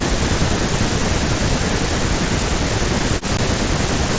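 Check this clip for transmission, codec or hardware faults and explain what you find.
Two faults are present in this speech: repeated suppression consistent with double talk, and one brief packet dropout on the Bluetooth headset link.

Speech suppressed in double talk occurs from 0.0 to 0.19 s, 0.42 to 1.81 s and 2.68 to 4.18 s. The likely cause is the echo canceller mistaking the talker for loudspeaker echo while both sides spoke, so it attenuated everything, with level dips reaching about 30 to 35 dB.

Unconcealed Bluetooth headset packet loss occurs at 3.37 s. A 15 ms stretch of audio between headset and phone never arrived and nothing filled the gap, which fits roughly two lost headset packets. The result is a short hole with abrupt edges in the speech.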